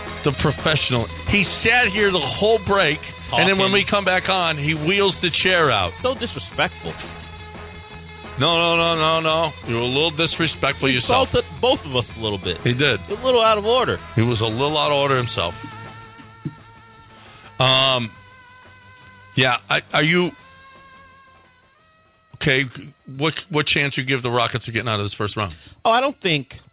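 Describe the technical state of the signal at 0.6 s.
At 0.6 s the signal is intact, passing cleanly through the G.711 A-law call path with its narrowband ceiling at 4 kHz and no fault at that moment.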